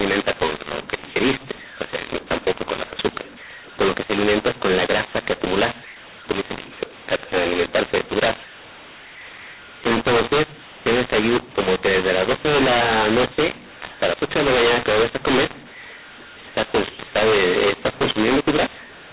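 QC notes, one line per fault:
throughout, mu-law and A-law mixed up: speech coded with the mu-law G.711 curve is decoded as A-law, scrambling sample levels into harsh distortion and lifting quiet passages into noise.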